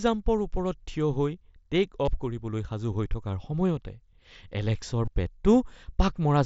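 At 2.05 to 2.08 s, just before "অফ কৰিবলৈ সাজু হৈ", and again at 5.05 to 5.08 s, there's concealed Bluetooth headset packet loss. Each time a short run of packets from the headset went missing, about 22.5 ms, which fits three lost frames, and the phone filled the gap by repeating the best-matching slice of recent waveform. You get a brief buzzy, held tone with a slight warble as the real sound comes back, all sitting inside the mSBC headset codec's band-limited sound.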